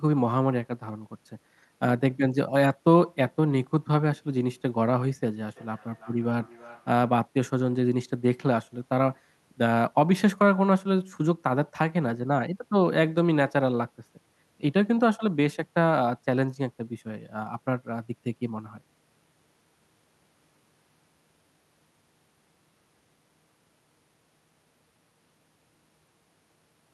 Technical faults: feedback echo between two devices

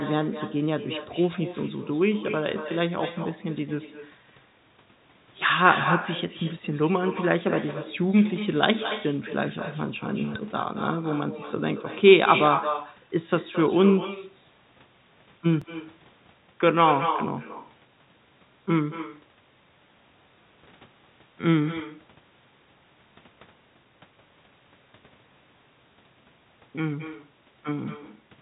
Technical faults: echo with no canceller; repeated buffer

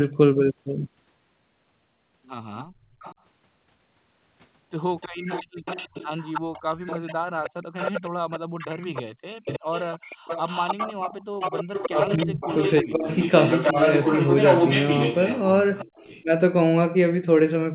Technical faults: echo leak; speech suppressed in double talk

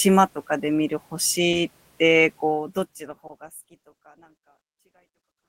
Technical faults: short concealed packet loss

